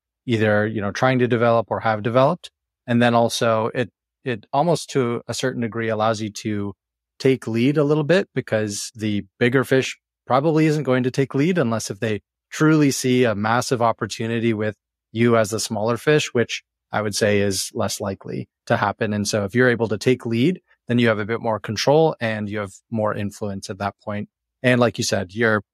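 No technical faults can be heard in the recording, so there are none to describe in time order.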